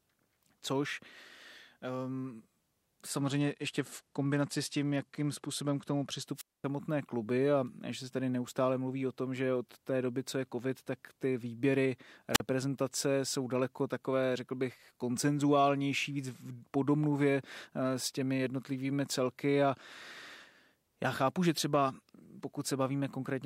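A Bluetooth SBC bit pool drop runs from 3.17 to 6.25 s. The link appears to have throttled the encoder, which fits a bit pool falling from 28 to 12, near 96 kbps. Starved of bits, the upper sub-bands go empty and the rest are coarsely quantised, so the speech turns dull and gritty until the rate recovers.

A wireless microphone squelch dropout follows at 6.35 to 6.65 s. The FM signal fades, the receiver's squelch closes, and a brief burst of hiss gives way to a 230 ms hole before "kluby a". A shorter one at 12.33 to 12.40 s, right after "covid tak ty výběry", mutes for 42 ms.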